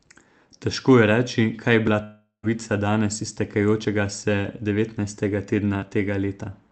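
A long network dropout hits this speech recording from 2.03 to 2.45 s. About 0.4 s of speech is missing. The receiver fills the gap by stretching the last sound into a buzzy or hissy tail that fades, leaving roughly 0.11 s of near-silence before the audio returns at 2.45 s, with nothing of the lost stretch recovered. The likely cause is a run of packets that never arrived. The call path's coding noise and its top cut-off at 8 kHz are present throughout, which fits Opus at around 32 kbps.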